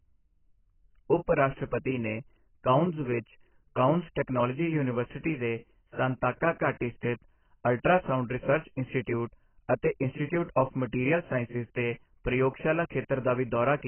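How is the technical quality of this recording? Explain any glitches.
Poor quality: heavy codec damage runs through the entire speech clip. Throughout, the sound is dull and smeared, with nothing above 3.1 kHz and a fizzy, warbling texture. The likely cause is AAC compression at roughly 12 kbps, which cuts the bandwidth and leaves coarsely quantised holes in the spectrum.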